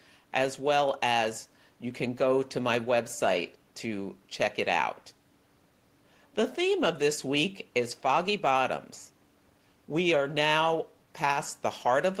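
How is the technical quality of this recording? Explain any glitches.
Nothing stood out on listening to this recording; the only background is faint room noise sitting about 38 dB below the speech, which belongs to the space rather than the system.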